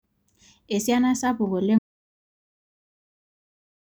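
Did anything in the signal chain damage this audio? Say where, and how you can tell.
Yes. An audio dropout to silence begins at 1.79 s and runs to the end of the clip: the speech cuts off mid-flow into silence with no room tone. This is likely an input-side loss, a disconnected device or failed link, while the recorder kept writing samples.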